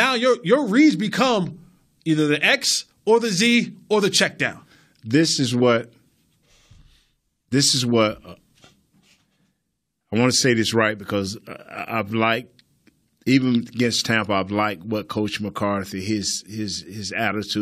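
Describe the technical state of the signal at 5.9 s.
At 5.9 s the speech signal is intact, with no dropout, clipping, glitch or other audible fault at that point.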